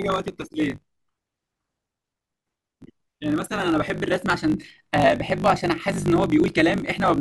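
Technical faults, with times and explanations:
Throughout, block size mismatch (truncated): the speech carries a steady 50 Hz buzz and runs about 1.16 times too fast. One stage hands over longer blocks than the next stage takes in, so the tail of every block is dropped. Each cut makes a small discontinuity, and these repeat at the block rate to form the buzz. The missing pieces shorten the timeline, which fits written blocks of 1024 samples.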